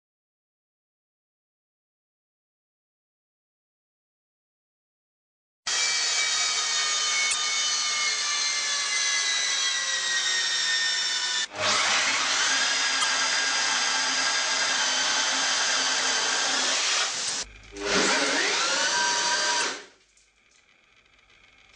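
Damaged data in a compressed stream strikes at 7.30–7.35, 13.00–13.04, 17.26–17.30 and 19.58–19.62 s. Each time, the decoder loses frame sync and emits a brief glitch.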